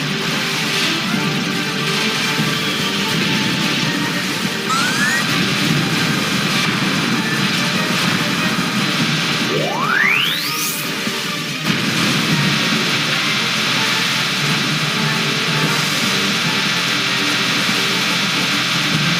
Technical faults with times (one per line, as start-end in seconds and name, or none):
none